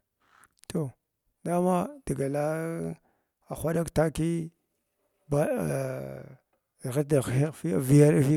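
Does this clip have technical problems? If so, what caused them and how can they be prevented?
No, there are no technical problems to report here.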